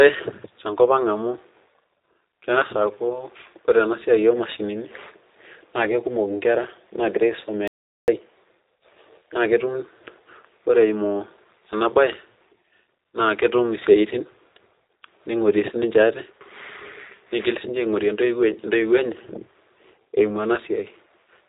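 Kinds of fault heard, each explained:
G.729 codec: The speech is rebuilt from a vocal tract filter, a pitch predictor and sparse pulses, which fits G.729A at 8 kbit/s. Nothing above 3.8 kHz passes, so the sound is band-limited, rough and plainly synthetic throughout.
Audio dropout to silence: The sound cuts out from 7.68 s to 8.08 s, leaving 404 ms of silence with no room tone. The likely cause is a lost input or link, with silence written in place of the missing audio.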